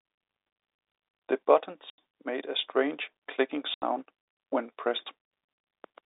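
At 1.90 s and again at 3.74 s, the speech drops out for 80 ms. These are packet loss filled with silence, hard-edged gaps that fit four 20 ms packets.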